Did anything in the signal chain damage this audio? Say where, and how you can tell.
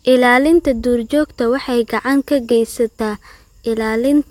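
No, nothing in the signal chain has damaged this speech recording. At no point does any stage between capture and playback leave a mark that can be heard.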